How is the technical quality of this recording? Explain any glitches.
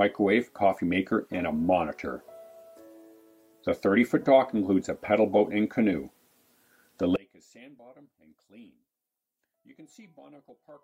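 There's one real problem, and it arrives late. From about 7.16 s to the end at 10.84 s, the sound suddenly drops by about 30 dB, with the centre of the mix all but gone. That's the classic signature of one channel inverted: the likely cause is one stereo side flipped in polarity, so whatever both channels share cancels on a mono sum, leaving only the faint difference between them.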